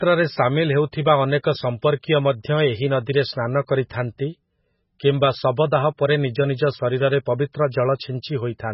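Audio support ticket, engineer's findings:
Watery, swirling speech throughout, hard treble ceiling at 5.6 kHz. Likely MP3 compression at a very low bitrate, consistent with roughly 16 kbps: weak spectral lines toggling per frame. The swirl and smeared attacks rule out a plain low-pass filter.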